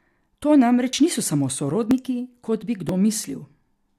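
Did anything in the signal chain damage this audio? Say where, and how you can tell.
Yes, overlap between stream segments: skips at 0.93 s before "niso sami", 1.91 s after it, and 2.89 s, one per 1 s segment, where 5 ms of real audio gets trimmed.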